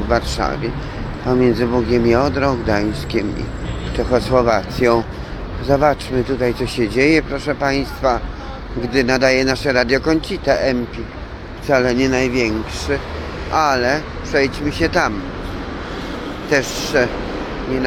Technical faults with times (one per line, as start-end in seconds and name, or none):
none